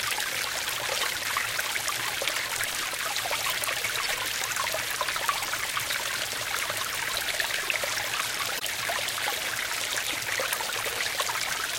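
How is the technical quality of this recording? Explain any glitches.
The quality is let down by four short glitches from corrupt frames being decoded: at 1.00 to 1.03 s, 4.04 to 4.10 s, 8.52 to 8.63 s and 10.11 to 10.13 s. Each is a brief chirpy burst of noise. Flipped bits in a compressed frame got played anyway, so energy landed at the wrong frequencies for a couple to a few frames' worth. The first burst peaks loudest, around -10 dBFS, and the last two are softer, near -20 dBFS.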